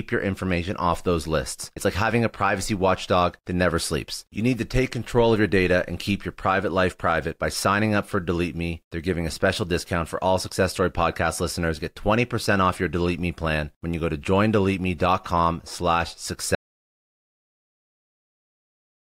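At 16.55 s, right after "com slash", an audio dropout to silence cuts the speech mid-flow, likely from lost input. Flat-line waveform and blank spectrogram, without room tone, until the end.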